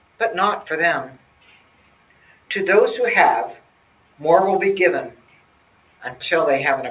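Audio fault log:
Throughout: noise suppressor applied to music or sounds. A speech-oriented suppressor treats steady and decaying parts of the sound as noise, so gain swings by around 10 dB. Held material pumps and thins while onsets survive. The waveform envelope breathes, and the spectrogram shows sustained bands fading.
0.0–0.2 s, 1.15–2.5 s, 3.55–4.2 s, 5.11–6.02 s: sound cut by the noise suppressor. In each span the suppressor pulls level down by as much as about 12 dB, clipping sustains and tails short. The waveform shows clear envelope dips, and spectrogram energy darkens abruptly across the narrowband band below 4 kHz.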